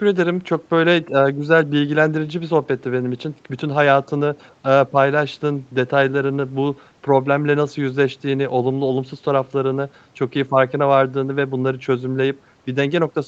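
No technical faults are audible in this speech.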